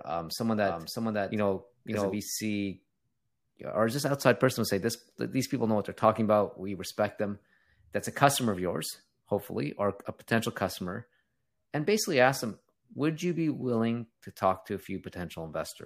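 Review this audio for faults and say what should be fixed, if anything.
Just after "um someone", from 0.57 to 2.17 s, the speech doubles: a flat copy about 5 dB quieter trails about half a second behind, then cuts off abruptly. This doubled audio track is likely a second capture path or misaligned edit layer mixed in. To prevent it, route only one capture path to the mix and check edits for overlapping duplicate regions.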